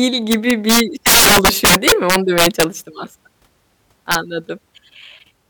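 From 0.32 to 2.64 s the speech breaks into violent cracks from integer overflow, driven about 15 dB past the limit, so loud peaks wrap to the opposite sign instead of flattening. That full-range flip is far harsher than clipping. A brief repeat at 4.12 to 4.15 s, about 3 dB over, gives sharp cracks.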